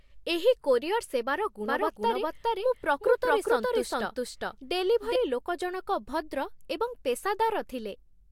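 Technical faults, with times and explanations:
1.66 to 5.16 s, doubled audio track: right after "ଏହି କୋରିଅର ସେବାର" the speech gains a second copy about as loud as the first, trailing around 400 ms behind. It is dry and full-band and starts and stops abruptly, likely from a second capture path or a misaligned edit layering the audio twice.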